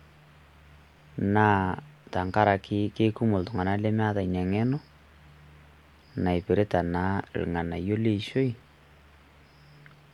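No technical faults can be heard anywhere in this speech recording.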